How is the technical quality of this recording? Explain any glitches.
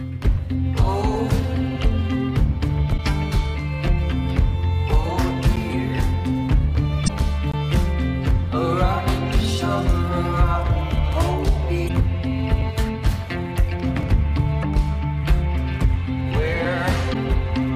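The recording has two recurring faults, damaged data in a compressed stream and a block of digital silence.

At 2.94–3.00, 7.04–7.10, 11.85–11.90, 14.59–14.65 and 17.10–17.15 s, damaged data in a compressed stream makes the decoder lose frame sync, producing brief glitches of about 55 ms.

At 5.56, 7.52, 11.12 and 14.03 s, a block of digital silence lasting 2 to 20 ms appears, giving abrupt ticks and, at 7.52 s, a short hole.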